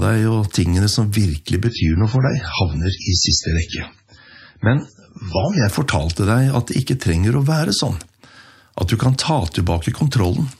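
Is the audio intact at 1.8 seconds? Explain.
No. At 1.8 seconds the sound is inside a stretch from 1.67 to 5.67 s where an adaptive stream switched to a lower bitrate. The connection could not keep up, so the player fell back to a leaner encoding. The shift is sudden, with no gap. Nothing survives above 7.6 kHz, so the top end sounds dull. Codec artefacts rise. This fits an MP3 stream dropping from about 128 kbit/s to about 16 kbit/s.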